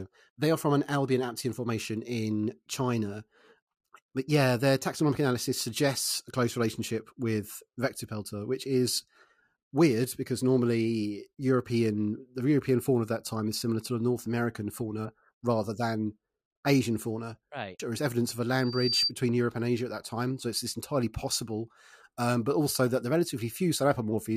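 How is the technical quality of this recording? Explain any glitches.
One glitch stands out: loudspeaker feedback squeal from 18.59 to 19.12 s. A 4.7 kHz tone swells over about 0.4 s to roughly 5 dB above the speech, because the microphone picks up the loudspeaker it feeds and the loop gain exceeds one at that frequency. On a spectrogram it shows as a bright horizontal line.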